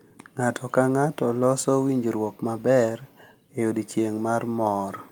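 Nothing in this speech recording points to a technical fault: the signal holds together without any audible break, distortion or disturbance.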